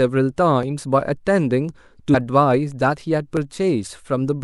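A speech recording with two kinds of fault. Sharp single clicks sound at 0.63 s and 3.37 s. Each is a thin, instant tick. The likely cause is dropped samples: under a millisecond of the stream goes missing, so the waveform jumps abruptly. At 2.13 s, compressed frames are skipped. The audio leaps forward by about a fifth of a second. That fits roughly seven lost frames of 26.1 ms each.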